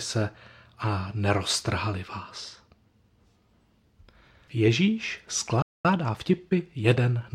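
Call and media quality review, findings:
Speech cuts to silence at 5.62 s for about 225 ms, then resumes at 5.85 s. Playback stall, likely a player underrun or blocked output thread.

Speech hurried at unchanged pitch, 5.85 to 7.27 s, about 1.1x speed. Time-compressed catch-up: player splicing out small segments to drain backlog.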